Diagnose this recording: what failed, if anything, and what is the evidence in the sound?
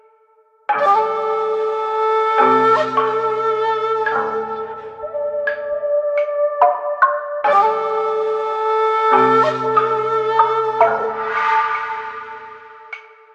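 Frames out of order at 10.99–11.05 s, network stage: two adjacent 23 ms blocks, consistent with single codec frames, play swapped, producing a brief garbled flutter.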